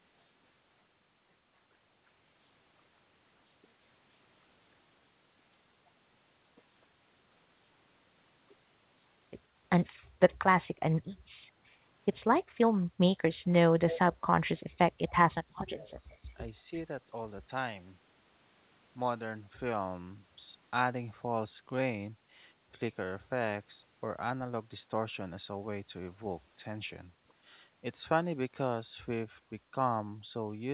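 Echo leak, 13.90 to 13.99 s: a brief, faint copy of the speech returns about 180 ms late and roughly 10 dB below it. This is likely the far end's loudspeaker sound reaching its microphone, with the echo canceller letting a short scrap slip back.

Speech suppressed in double talk, 15.44 to 16.41 s: for about one second the speech sinks by as much as around 25 dB. Both sides were likely talking at once, so the echo canceller mistook this talker for echo and attenuated it.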